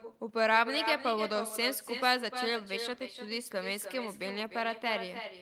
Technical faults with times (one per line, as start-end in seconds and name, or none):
0.00-5.42 echo with no canceller